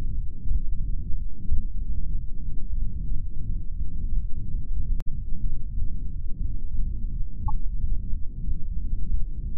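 At 1.52 s, 5.00–5.07 s and 7.47–7.50 s, damaged data in a compressed stream garbles decoded frames into short glitches, appearing as abrupt broadband vertical streaks.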